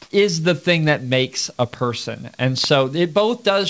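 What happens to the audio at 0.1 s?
From 0.02 to 0.10 s, the sender likely halted transmission when its voice detector heard no speech, and the receiver filled the 80 ms gap with comfort noise in place of the background. The real background becomes a steady, featureless hiss, shifted by about 14 dB.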